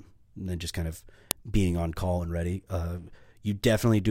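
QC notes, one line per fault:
1.31 s, file header played as audio: a single sharp, loud click cuts into the speech, a brief snap that sits on top of whatever the signal is doing at that instant rather than following it. The clip behaves as if a second WAV piece was joined on here without its header being stripped, so those few dozen bytes of file metadata were read as sample values and played out as a short burst.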